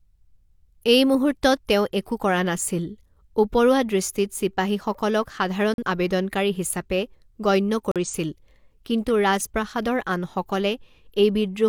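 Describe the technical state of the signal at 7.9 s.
A corrupt frame muted at 7.92 to 7.96 s: the decoder rejected one damaged compressed frame, so the speech drops to abrupt silence for 44 ms while timing holds.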